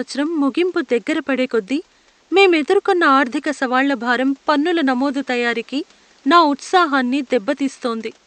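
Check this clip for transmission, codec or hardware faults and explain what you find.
No transmission, codec or hardware faults can be heard in the speech. A low background noise from the room sits about 37 dB below the speech and belongs to the recording itself.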